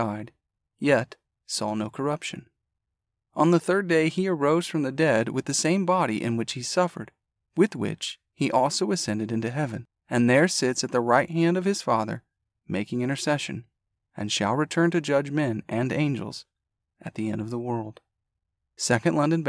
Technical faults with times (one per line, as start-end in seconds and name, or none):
none